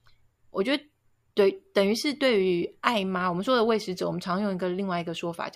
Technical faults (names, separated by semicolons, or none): none